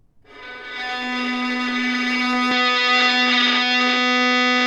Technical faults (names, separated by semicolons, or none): input switched to a poorer device